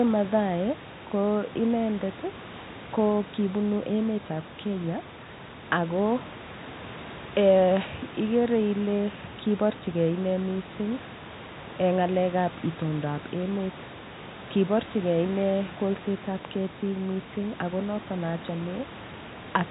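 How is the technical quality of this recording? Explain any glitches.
No glitches can be heard anywhere in this speech recording. It has the narrow telephone-band sound of G.711 coding, with nothing above 4 kHz, and a steady room noise sits about 18 dB below the speech.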